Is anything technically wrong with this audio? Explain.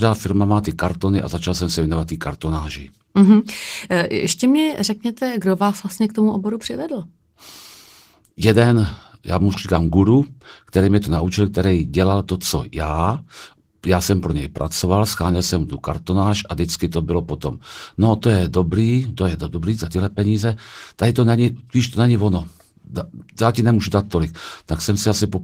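No, nothing's actually wrong here; the speech has simply been through Opus voice compression, which leaves only a light trace on the sound.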